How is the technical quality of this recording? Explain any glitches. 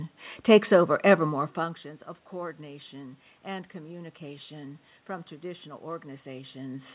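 No technical faults are audible.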